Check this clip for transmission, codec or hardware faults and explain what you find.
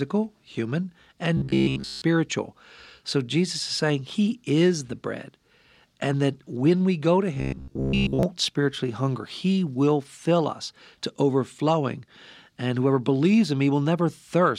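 Robotic sound from repeated short buffers appears twice, at 1.37 to 2.02 s and 7.35 to 8.23 s. The speech turns into a rigid, metallic 66.7 Hz buzz. The first stretch is entirely buzz, the second mostly. Audio likely arrived too seldom, so the last chunk kept repeating. The buzz pitch fits a 15 ms buffer.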